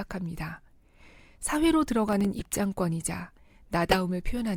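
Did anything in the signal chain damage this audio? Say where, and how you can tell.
Yes. Processor overload crackle, 2.08 to 2.25 s, in the driver or buffer stage: several very short buffers, around a millisecond and a half each, missed their deadlines and dropped to silence, tearing the speech.

Corrupt frame decoded, at 2.39 to 2.42 s and 3.91 to 3.96 s, in the codec: damaged frames were played anyway, misplacing energy into brief chirpy bursts.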